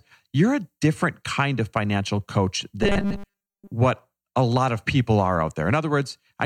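From 2.83 to 3.72 s, after "kind of financial coach", robotic sound from repeated short buffers: a fixed 200 Hz metallic buzz, likely from 5 ms chunks replayed for most of that stretch, unlike audible stutters.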